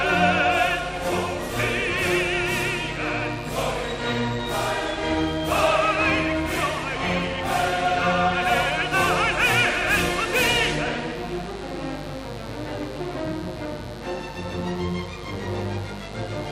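A mains buzz runs through the whole clip. Sharp switching spikes from the power supply leak in twice per 50 Hz cycle. Their harmonics climb into the kilohertz range. The result is a steady, raspy buzz, only about 15 dB below the sound itself.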